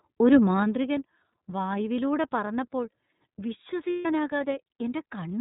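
From the start the speech has that iLBC codec sound: narrowband, nothing above 4 kHz, a bit rough and synthetic, which fits the 13.33 kbps, 30 ms frame mode. There are lost iLBC frames at 1.31 to 1.34 s, and a longer loss from 3.90 to 4.06 s where a buzzy held vowel fills in. The speech recovers almost immediately after each, since every frame decodes independently.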